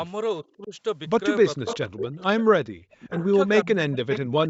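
At 0.57 to 0.73 s the speech dips by roughly 20 dB, the first sign of speech suppressed in double talk. It is likely an echo canceller mistaking the talker for returning echo while the far side also spoke. The drop is deeper, about 40 dB, from 1.57 to 2.21 s, 2.87 to 3.25 s, and 3.64 s to the end. Unlike a network dropout, these losses follow the overlap.

Over 1.66 to 2.44 s, 3.1 to 3.26 s and 4.1 to 4.18 s, an echo leak adds a delayed copy of the speech, trailing it by 475 ms at about 10 to 15 dB below it. This is likely the canceller failing to remove loudspeaker pickup. That fixed lag sets it apart from room reverberation, which smears smoothly instead of repeating the sound.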